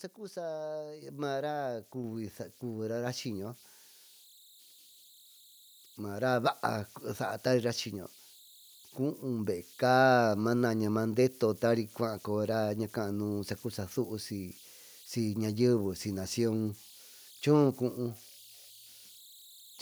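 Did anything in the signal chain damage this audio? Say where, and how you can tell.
Yes. Converter idle tones run through the whole clip, so the damage sits at the converter stage. A faint whistle around 4 kHz sits in the pauses, and a grainy texture lies under the quieter stretches of speech, about 28 dB below the signal. The delta-sigma converter has no dither, so when the input is small its modulator locks into repeating bit patterns. Those cycles come out as a steady tone whose pitch follows the input's DC offset.

A microphone volume step-up occurs at 1.02 s, in the call processing stage. The speech and the background noise jump up together by about 5 dB in a single step, with no ramp. That points to the call software judging the microphone too quiet and raising the device's input volume in one move. Because the change happens before capture, everything the microphone picks up rises by the same amount at once.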